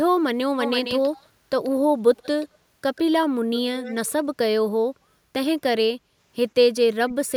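Echo leak appears at 0.6–1.29, 1.64–1.7, 2.16–2.47, 2.95–3.01 and 3.76–4.13 s: a copy of the speech trailing it by 142 ms, about 10 to 30 dB down, likely from a loudspeaker echo canceller letting residue through. Its fixed lag separates it from room reverberation. Background gated by the echo canceller follows at 6.03–6.17 s, where the room sound briefly dips by about 6 dB and then recovers, with no delayed copy present. Speech suppressed in double talk comes at 7.05–7.32 s, with the talker cut by around 30 dB, likely because the canceller clamped down while both sides spoke. Here the voice itself drops, not just the background.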